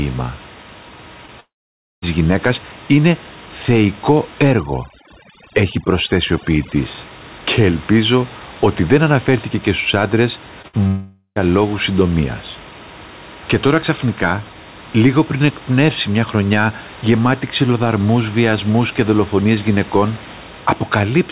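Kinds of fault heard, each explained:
short concealed packet loss: About 20 ms of audio goes missing at 1.26 s and again at 10.62 s. The receiver bridges each gap by extending the preceding sound, which leaves a tiny smear or wobble. Unlike a burst, the gap is too brief for any fade to be heard.
long network dropout: No audio arrives for a long stretch, likely from a network interruption. From 1.4 to 2.04 s, about 0.62 s is lost: a fading continuation, then roughly half a second of silence before "γυναίκας είναι θεϊκό". From 10.87 to 11.38 s, between "αναφέρθηκε και στους άντρες" and "λόγους συντομίας", the gap is mostly filled, with only brief silence.
overdone noise removal: After "γυναίκας είναι θεϊκό", from 4.51 to 6.76 s, noise reduction set too strong clamps down on bands near the noise floor. The background becomes near silent with twinkling specks.
burst of packet loss: Around 10.68 to 10.75 s, roughly 60 ms of consecutive audio is lost. 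The gap is filled by a held buzz or hiss that weakens, and then speech resumes further on. It is longer and more audibly faded than the 20 ms losses, but far shorter than a dropout.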